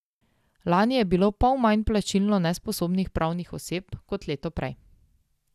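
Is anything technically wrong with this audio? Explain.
Yes. Generation loss runs throughout this speech: repeated MP2-style re-encoding, likely about seven passes, piles up quantisation noise, leaving swirly, hollow, smeared sound with blurred attacks and nothing above 15.7 kHz.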